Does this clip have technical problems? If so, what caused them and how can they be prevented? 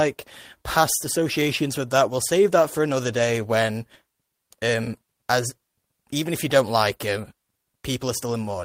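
Yes: a lost packet rebuilt from error correction at 7.19–7.25 s, after "if you don't like." A rougher, noisier stretch of about 40 ms, which fits two lost packets, replaces a gap or smeared repeat. Reducing packet loss on the network path prevents it.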